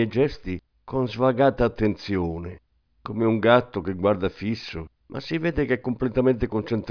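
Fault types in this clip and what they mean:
Nothing wrong turns up anywhere in this bit of speech, so there's no fault to list.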